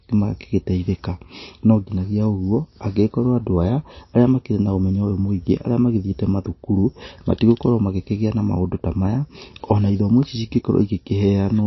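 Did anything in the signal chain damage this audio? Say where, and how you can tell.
Yes, at the codec stage. Throughout, nothing sounds above 5.8 kHz, and the speech is watery and swirly. Likely MP3 compression, starved near 27 kbps.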